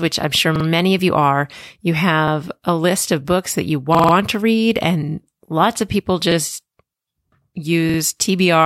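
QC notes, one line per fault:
0.56–0.65 s: repeated buffer, a roughly 46 ms slice plays three times in a row with hard joins, a quick stutter.
2.28–2.32 s: repeated buffer, one 46 ms chunk doubled.
3.95–4.13 s: repeated buffer, the worst one, the same chunk five times over.
6.32–6.36 s: repeated buffer, single doubling.
7.90–7.99 s: repeated buffer, heard three times.
Audio arrived late, so the device replayed its last block. The length fits a 2048-sample buffer.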